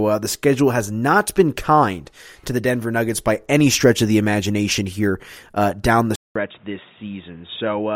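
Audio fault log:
6.16–7.95 s, input switched to a poorer device: after "here uh down the", a 200 ms gap, then duller, quieter sound cut off above 3.8 kHz with new background noise; likely a microphone change.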